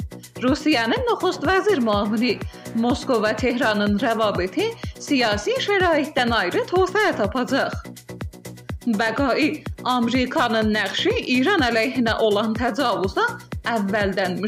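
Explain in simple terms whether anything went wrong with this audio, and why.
The recording software likely fell behind twice and missed a short chunk of audio, a dropped buffer (overrun). About a hundredth of a second vanished each time, so the sound jumps forward at 6.19 s and 10.36 s.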